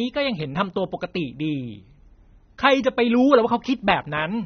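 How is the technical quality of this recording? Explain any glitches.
The technical quality is poor. Throughout, the speech sounds dull and smeared, with a warbling, fizzy edge and nothing above about 6.3 kHz. This is likely AAC compression at a low bitrate, around 24 kbps, which cuts the high band and coarsely quantises the rest.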